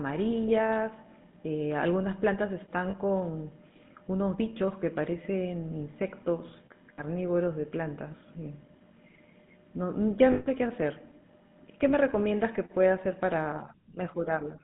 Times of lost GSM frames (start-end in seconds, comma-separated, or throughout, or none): 2.90-2.95, 6.94-7.01, 10.32-10.47